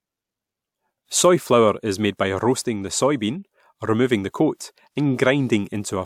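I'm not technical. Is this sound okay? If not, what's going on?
Yes, no faults heard.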